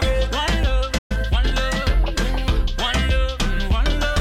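At 0.98 s a playback stall cuts the sound to silence until 1.12 s, most likely because the player ran short of buffered data, then output resumes mid-flow. From 1.12 to 1.60 s a time-compressed catch-up follows: the player cross-fades out small slices to clear its backlog, so the audio runs hurried at 1.25 times speed, pitch unchanged.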